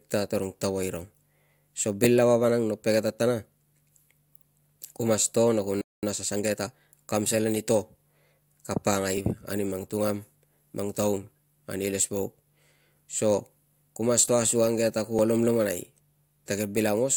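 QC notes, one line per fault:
5.81–6.03 s, playback stall: right after "na ku" the speech cuts out mid-flow and the output falls completely silent for about 0.21 s before the talker resumes. The likely cause is the player running out of buffered data, or its audio thread being blocked, so nothing reached the output until it recovered.
6.03–6.87 s, time-compressed catch-up: as the speech resumes after "na ku", it sounds hurried for a little under a second, running at about 1.25 times normal speed while the pitch stays where it was. To shed the backlog built up during the stall, the player removes short slices of audio and cross-fades across the joins. That shortens the passage without transposing it.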